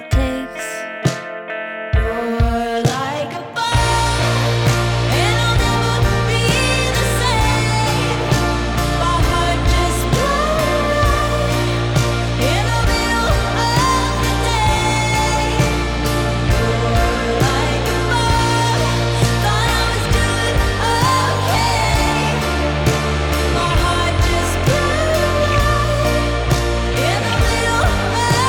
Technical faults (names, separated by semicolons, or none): sample clock jitter